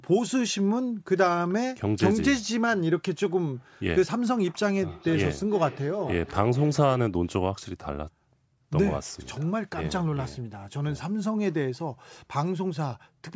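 From 4.87 to 7.29 s, the speech comes back at a fixed spacing of about half a second, with the loudest return about 15 dB below the direct speech. This is feedback echo between two devices. Two devices in the same room are on one call, and one plays what the other's microphone sends. That microphone then picks up the playback and sends it round again. Each device's echo canceller removes only its own playback, so it misses this loop.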